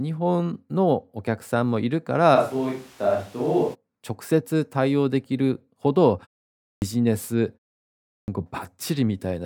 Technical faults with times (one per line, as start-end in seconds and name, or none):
2.37-3.73 switch to a distant microphone
6.50-6.82 clipped start after a pause
7.97-8.28 clipped start after a pause